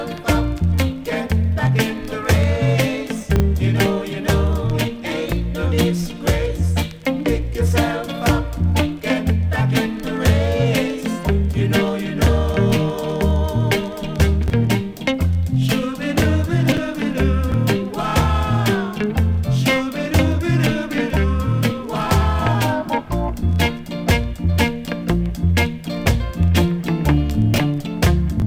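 Two brief jumbled moments, at 3.36 to 3.40 s and again at 27.54 to 27.58 s, come from chunks out of order: a 20 ms block of audio arrives one chunk late and plays after the block that should follow it, so nothing is lost but the sequence is swapped. Each swap leaves three hard joins, which show as sharp steps in the waveform and thin vertical broadband lines on a spectrogram.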